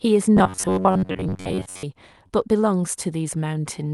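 From 0.37 to 1.84 s the speech turns into a rigid, metallic buzz pitched at about 94 Hz that only loosely tracks the words. This is robotic sound from repeated short buffers, likely caused by audio arriving too seldom, so a slice of roughly 10.7 ms was looped for most of that stretch while fresh audio was skipped.

At 2.27 to 2.31 s a brief smear interrupts the speech. This is short concealed packet loss: about 20 ms of audio never reached the decoder in time, and the receiver extended the preceding sound for about 21 ms before blending back into the real signal. Through the Opus call path, the top end stops at about 12 kHz.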